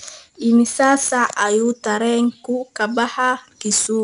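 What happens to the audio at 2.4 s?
At 2.4 s you're hearing 4-bit ADPCM compression, present across the whole clip: coarse adaptive 4-bit steps leave a gritty hiss riding the speech, and nothing gets through above 10.6 kHz.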